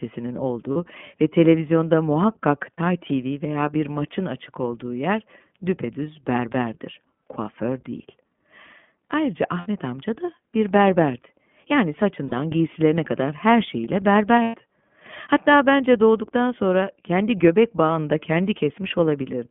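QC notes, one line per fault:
Throughout, iLBC codec: the speech is narrow and slightly rough and synthetic, with nothing heard above 3.4 kHz and little below 150 Hz. The codec damage is plainly audible. The band and grain come from iLBC coding each 20 ms frame's excitation on its own at a low rate, which fits the 15.2 kbps mode, so fine detail in each pitch cycle is smoothed into a buzzier approximation.
0.72–0.77 s, 2.74–2.79 s (after "ve televizyonda muhakkak"), 9.60–9.67 s (before "amca da bir berberdi"), 12.28–12.34 s, 14.42–14.56 s (after "giysilerine kadar her şeyiyle"), lost iLBC frames: brief held, buzzy-breathy vowel sounds replace the speech for 40 ms, 40 ms, 60 ms, 40 ms and 120 ms. The decoder filled each gap by repeating the last pitch cycle mixed with noise. Because each frame decodes independently, the voice snaps back cleanly right after every gap.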